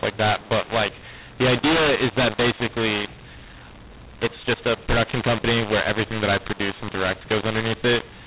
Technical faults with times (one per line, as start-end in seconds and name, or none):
0.00-8.27 mu-law and A-law mixed up